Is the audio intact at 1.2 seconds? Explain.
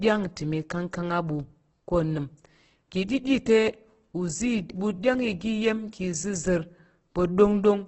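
No. Opus compression damages the speech at 1.2 seconds as it does throughout, likely from a very low bitrate, around 12 kbps. With bits scarce, bands are filled by folding or noise, leaving grainy, rough speech with nothing above 8.2 kHz.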